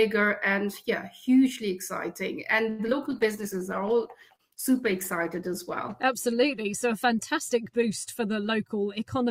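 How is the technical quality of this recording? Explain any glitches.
The recording has four distinct network-related glitches, clustered around 2.7 to 6 s and again at the very end.

From 2.69 to 2.95 s there is repeated packet loss, giving a brief robotic sound. Several holes arrive in quick succession, the longest about 96 ms. Each is bridged by extending the last bit of sound, and some audio simply drops out. Nearly half of this quarter-second is patched rather than real, so it turns choppy. Unlike the bitrate drop that follows, this is broken in time, not dulled in tone.

From 3.11 to 6.05 s a call bitrate drop takes over. The encoder was starved of bits, which fits a fall from 64 to 15 kbps, and it stayed at that floor for about 2.8 s. The codec codes coarsely and trims off the high frequencies, so the sound turns muffled and watery. There are no holes from the bitrate drop; the continuity is intact, just dull and smeared, which separates it from the packet loss.

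Inside that stretch, from 3.41 to 3.98 s, a jitter buffer slow-down stretches the audio. The receiver repeated single pitch periods to rebuild its reserve, adding about 45 ms, so playback runs at 93% speed. Pitch holds steady while sounds are drawn out. A tape-style slowdown would drop the pitch, but here only the timing changes.

From 8.51 s to the end, a jitter buffer speed-up does the opposite. The buffer had too much audio queued, so the receiver cut out short pitch-period slices, removing roughly 50 ms in total. Playback runs about 5% fast at the same pitch and sounds slightly hurried. It is the mirror image of the slow-down: time is compressed rather than padded, with no gaps and no loss of brightness.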